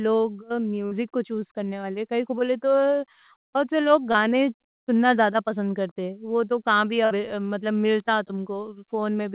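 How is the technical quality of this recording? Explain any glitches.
The recording has three short packet-loss dropouts. The speech is also band-limited, with nothing above 4 kHz, which fits a narrowband G.711 call codec.

A burst of packet loss occurs from 0.86 to 0.94 s and again from 7.05 to 7.13 s. Each time, about 60 ms of audio never arrived. The receiver extended the last sound for about 50 ms, fading it out. This gives a brief held buzz or hiss, then a small jump ahead.

A short concealed packet loss occurs from 4.12 to 4.17 s. About 30 ms was missing. The receiver filled about 20 ms by continuing the previous sound, then blended back into the real audio. It sounds like a quick smear or wobble.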